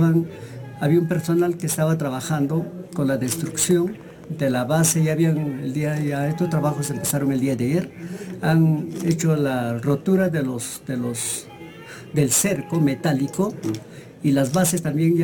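From the first moment to the end, there's crude rate conversion going on. The sample rate got bumped up by simply repeating the nearest sample instead of filtering properly, and the grainy pattern fits a jump from 32 kHz to 44.1 kHz. That leaves a repeating error that sits roughly 20 dB below the sound itself, heard as a gritty, inharmonic fizz that rides along with the louder and brighter moments.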